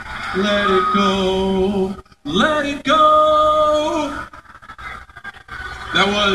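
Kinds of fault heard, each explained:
No technical faults can be heard in the signal: the audio runs continuously without dropouts, clicks, distortion, level jumps or added noise.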